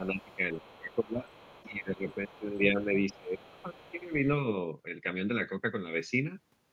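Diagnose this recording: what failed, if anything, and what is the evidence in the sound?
Speech ducks by up to about 20 dB at 0.0–1.27 s and about 15 dB at 1.64–4.22 s: likely speech suppressed in double talk during call processing.

A faint second voice, about 25 dB down, runs at 0.22–1.71 s and 2.11–4.09 s: likely the other side's voice leaking through incomplete echo cancellation.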